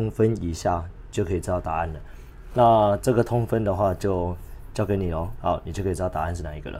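Nothing here sounds technically wrong; there's no point in the audio where anything gives way or trips up.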